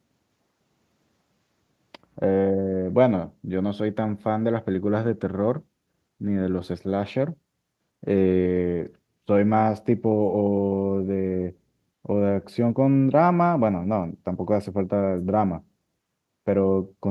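No technical faults can be heard anywhere in the recording. There is nothing here that calls for a timestamp or a closer listen.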